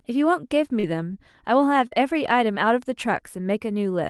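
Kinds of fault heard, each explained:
Short concealed packet loss: At 0.79 and 1.87 s, 40 ms went missing, patched by extending the prior sound: a brief smear, not a silent dropout.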